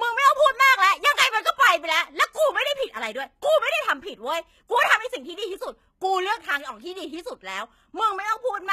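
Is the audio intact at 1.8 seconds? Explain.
No. At 1.8 seconds, as across the whole clip, the speech has plainly audible codec damage, likely HE-AAC compression at a low bitrate around 20 kbps. The treble above the coded band is rebuilt from copied lower bands, so s sounds turn gritty and metallic, with nothing above 14.9 kHz.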